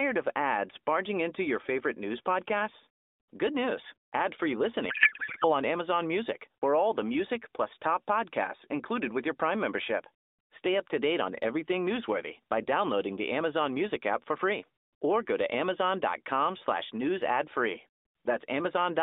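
A speech recording carried over an AMR narrowband mobile link, limited to roughly 250 Hz to 3.7 kHz with the mild coding texture of a higher AMR mode, suffers a codec payload misread from 4.90 to 5.52 s. The frames were packed octet-aligned but decoded as bandwidth-efficient, so every parameter field lands in the wrong bits and the decoder synthesises garbled, warbling noise that barely tracks the speech. On a spectrogram the formant and harmonic structure vanishes into smeared, blotchy energy across the band.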